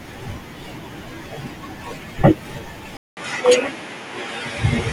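At 2.97 s the sound drops out for 0.2 s, then returns with nothing above 11.4 kHz and faint new background noise about 45 dB down, at roughly unchanged level. The gap and fresh background noise point to a likely input switched to a poorer device, not a filter.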